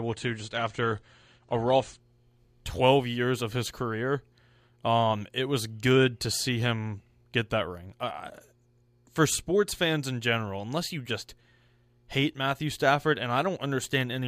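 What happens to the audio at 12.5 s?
At 12.5 s the speech continues without any audible fault; the audio is intact at that moment.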